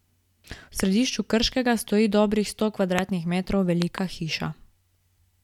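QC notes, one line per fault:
0.80–0.87 s, 2.99–3.01 s and 3.82–4.00 s, loud pop. A double pop, a single pop just after "stoji dobrih sto", then another double, peaking about 10, 20 and 15 dB above the speech. Likely a voltage spike sitting on top of the speech, which continues underneath.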